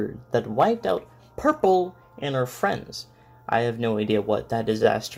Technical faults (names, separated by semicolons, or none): repeated frames